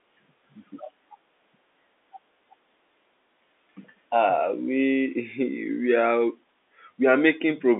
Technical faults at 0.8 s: none

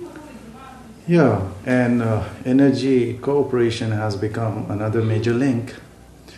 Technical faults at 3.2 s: video or display buzz

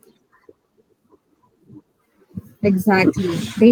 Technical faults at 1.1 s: lost packet rebuilt from error correction

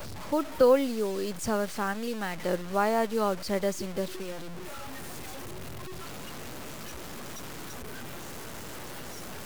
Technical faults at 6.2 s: low bit depth without dither

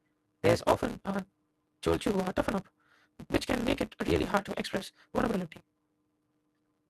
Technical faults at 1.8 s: block size mismatch (truncated)

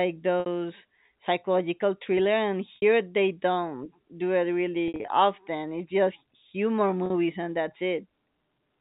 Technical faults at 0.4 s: packet loss with pitch repetition

